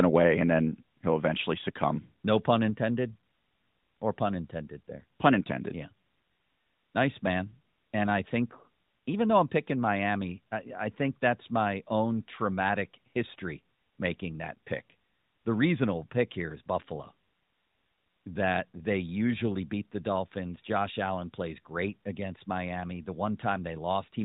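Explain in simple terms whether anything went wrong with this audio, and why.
A microphone volume stepped down twice: the call software likely turned the input down at 1.02 s and again at 9.42 s, so the speech and background suddenly get quieter.

Microphone overload at 5.25 to 5.28 s: the input likely ran too hot, clipping off the tops of the loudest moments and giving a brief harsh, crackly edge.

The phone-style narrowband sound comes from the mobile speech codec working as designed.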